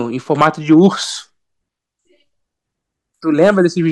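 A short speech clip with hard clipping in two places, from 0.32 to 0.86 s and again from 3.42 to 3.61 s, where the signal runs about 6 dB and about 5 dB past what the stage can pass. The peaks are sliced flat, giving a harsh, crackly fuzz on the loud syllables. A waveform shows squared-off tops, and a spectrogram shows broadband harmonic smear rising high above the speech during those spans.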